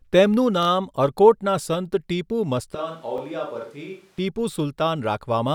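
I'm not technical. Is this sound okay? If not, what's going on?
No. There are two kinds of problem.

The first is a repeated buffer. The audio arrives in small chunks, each about 23 ms long, which fits a 1024-sample buffer. Twice a chunk came late, so the device played the previous one again. From 0.63 to 0.67 s, one tiny piece plays three times in a row. From 3.18 to 3.20 s, a piece plays twice. Each repeat is too short to hear as words. It sounds like a brief stutter or buzz.

The second is a switch to a distant microphone. From 2.75 to 4.18 s, the speech suddenly sounds roomy and hollow. It gets noticeably quieter, with less depth and more background noise. At 4.18 s it snaps back to normal. The likely cause is that the close microphone dropped out and a microphone further away took over.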